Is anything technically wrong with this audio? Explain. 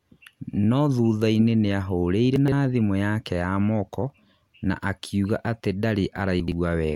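Yes. At 2.36 to 2.52 s and again at 6.4 to 6.52 s the speech briefly jumbles at hard joins. These are chunks out of order: a 40 ms chunk plays three chunks late, then two chunks late, after audio that should follow it.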